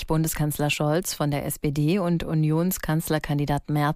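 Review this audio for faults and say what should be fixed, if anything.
Nothing here needs fixing, since no faults turn up anywhere in the audio.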